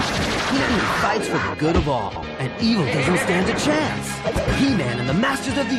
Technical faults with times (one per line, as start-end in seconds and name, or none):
0.60-0.79 frames out of order
2.08-2.23 frames out of order
4.29-4.49 frames out of order